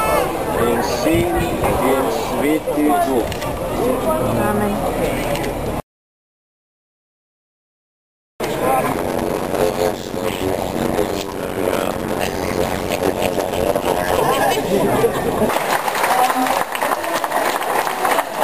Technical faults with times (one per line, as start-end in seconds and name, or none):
8.92-14.18 block size mismatch (padded)